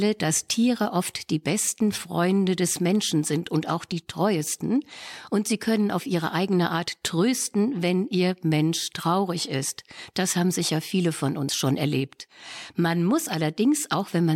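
At 3.92 s the speech jumps abruptly, with no gap of silence. The likely cause is a dropped buffer (overrun): the recording side failed to collect a block of samples before the hardware overwrote it, so roughly 5 ms of audio vanished and the surrounding sections were spliced together. On a waveform this shows as a sudden step in level or shape at the join, and on a spectrogram as a thin vertical line of broadband energy.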